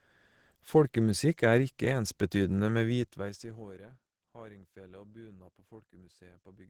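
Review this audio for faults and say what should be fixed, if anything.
Opus compression, likely, runs throughout the speech: it sounds muffled and hoarse with a plainly audible grainy roughness, which fits Opus in its hybrid speech mode at around 16 kbps, where too few bits leave the encoder approximating detail instead of preserving it. To prevent it, encode at a higher bitrate or keep an uncompressed master for review.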